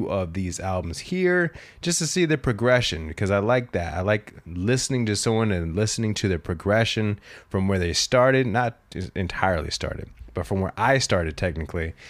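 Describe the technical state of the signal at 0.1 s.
At 0.1 s the signal is intact, with no audible fault at that point.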